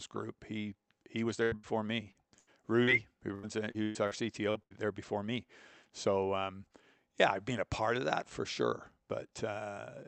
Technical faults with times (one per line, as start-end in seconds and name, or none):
1.43-1.66 burst of packet loss
2.11-2.17 short concealed packet loss
2.38-2.50 burst of packet loss
2.83-2.90 short concealed packet loss
3.35-4.14 repeated packet loss (robotic sound)
4.51-4.58 short concealed packet loss
4.63-4.73 burst of packet loss